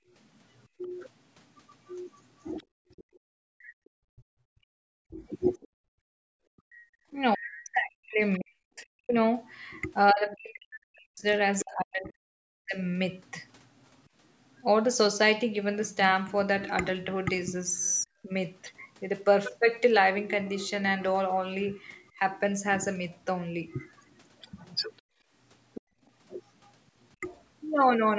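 From the start to 6.39 s the background is gated by the echo canceller: while the far end plays out of the loudspeaker, the room tone beneath the talker sinks by up to about 35 dB in short dips, about a second in all, and comes back when the canceller releases. Unlike double-talk suppression, the pauses and ambience vanish, not the talker's own syllables.

From 0.24 s to 14.63 s a faint second voice sits far below the talker, roughly 30 dB down. This is the other side's voice leaking through, likely residual loudspeaker echo the canceller failed to subtract from the microphone. It is a separate voice, layered on top of the talker rather than carved out of them.

Across 0.79 to 12.8 s the talker's speech is suppressed in double talk, with several seconds in total where syllables dip by as much as forty decibels or break into pieces while the far side is also talking, most likely because the canceller turned down both voices when it could not tell them apart. 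Shorter versions occur at 18.03 to 18.27 s, a brief dip of roughly 30 dB, and at 27.2 s, a short nick of about 5 dB. Here the talker's own voice is hollowed out, which sets it apart from gating, where only the background goes.

The leaking voice returns from 22.08 to 27.13 s, now louder at roughly 20 dB below the talker. Within that span, from 25.02 to 26.01 s, the background is gated again, dropping by about 29 dB for a fraction of a second.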